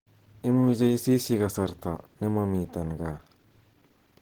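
Opus compression throughout the clip: the speech is plainly damaged by the codec and sounds muffled and hoarse, likely from its hybrid speech mode at a low bitrate, which fits roughly 16 kbps. The band still reaches about 20 kHz.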